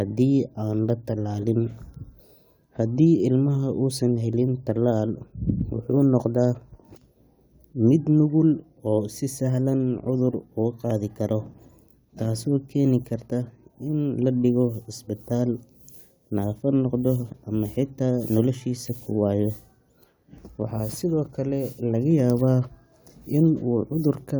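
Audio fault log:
Nothing to log here: this speech clip comes through with no faults to report.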